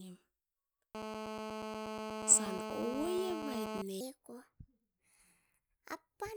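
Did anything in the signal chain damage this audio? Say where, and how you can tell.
Yes, two spots. From 0.95 to 3.82 s there's GSM phone buzz, a hard, raspy 217 Hz rasp with lots of harmonics, steady like an active call, sitting only about 5 dB under the speech. That's the analogue wiring rectifying a nearby handset's radio bursts.

From 4.01 s to the end, the section is at the wrong speed: everything runs 1.3 times fast, with pitch jumping up about five semitones and the speech sounding rushed and squeaky. Speed and pitch shift together, so the likely cause is playback or an edit clocked at the wrong rate.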